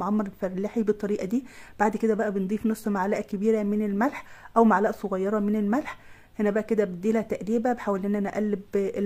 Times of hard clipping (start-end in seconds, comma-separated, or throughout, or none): none